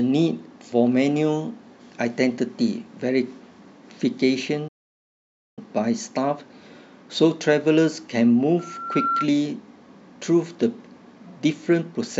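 At 4.68 s the speech halts and the output falls silent for about 0.89 s, resuming at 5.59 s. This is likely a playback stall, the player starved of data or blocked. Unlike a brief dropout, the gap is long and the speech then carries on afterwards.

From 8.59 s to 9.29 s a loudspeaker feedback squeal appears: a single 1.4 kHz tone swelling over roughly half a second until it is about as loud as the speech. The self-reinforcing rise marks it as loop feedback rather than a steady interfering tone.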